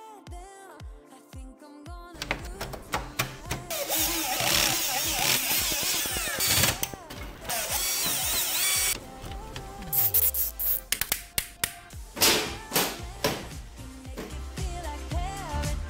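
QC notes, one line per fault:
5.52–6.95 s, train of clicks: a steady ticking cuts across the audio for about 1.4 s, roughly fifteen sharp pops at about 9.1 per second, evenly spaced and much alike in shape, each standing out roughly 10 dB above the surrounding sound. The regular pace and closely matched pulses point to something outside the recording itself, likely interference from nearby equipment or a faulty connection or power supply injecting a repeated impulse into the signal path.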